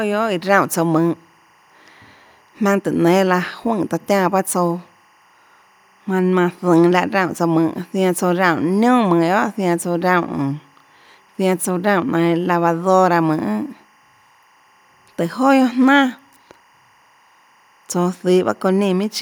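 Timecode bleed runs through the whole of this speech recording: a faint, steady chirping warble sits well below the voice, flipping between tones near 1 and 2 kHz, as linear timecode, apparently at 23.976 frames per second, leaks in from an adjacent track or cable.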